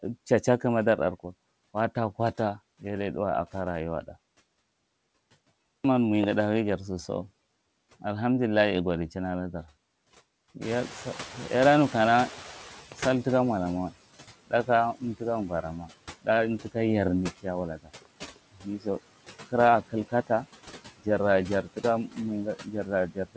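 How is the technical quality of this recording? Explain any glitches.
The recording has clear noise-suppression faults, with the background audibly pumped and parts of the speech dipped along with it. The audio stops at 8 kHz, which fits a wideband call codec such as G.722.

Noise suppressor artifacts run through the whole clip. The suppressor pulls down each band it judges to be steady noise, by up to about 17 dB, and re-decides every frame. The background therefore drops in the gaps and comes back up under the speech.

At around 10.5 s the room noise jumps sharply, by about 18 dB. The noise suppressor then has to catch up from 10.61 to 13.89 s. Its noise estimate is still tuned to the quieter room, so for roughly 3.3 s the louder noise comes through with less reduction at first. It then settles as the estimate adapts and the cut reaches about 15 dB. The effect is a burst of background that fades down over a few seconds.

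Speech is cut by the noise suppressor at 14.47–15.9 s, 17.43–18.86 s, 21.63–22.17 s, and from 22.56 s to the end. In these spans the suppressor mistakes quieter parts of the speech for noise and lowers them with the background. The drop is about 17 dB in the first two, about 12 dB in the third and about 18 dB at the end. The affected stretches are short, around a third of a second, under half a second and a fraction of a second. Soft sounds and word endings in them come out swallowed or faint.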